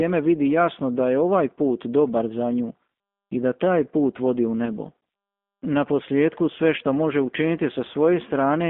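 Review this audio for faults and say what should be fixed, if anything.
G.729 codec throughout. The 8 kbit/s coder rebuilds speech from a filter and sparse pulses. The band is limited to roughly 200 Hz to 3.5 kHz, and the sound is rough and synthetic. Use a wideband codec such as G.722 or Opus where the link allows.

VoIP packet loss concealed by the speech codec at 4.65 to 4.69 s, right after "taj put vodi u". About 20 ms went missing, which fits a single lost packet. The decoder stretched its last frame into a fading buzzy tone or coloured noise. Add jitter buffering and forward error correction to cover lost packets.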